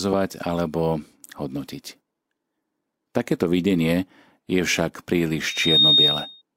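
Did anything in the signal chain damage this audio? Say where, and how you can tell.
Yes. At the playback stage, a microphone caught its own loudspeaker, so loudspeaker feedback squeal swells within about half a second into a 3.7 kHz tone from 5.40 to 6.42 s, roughly 10 dB above the speech.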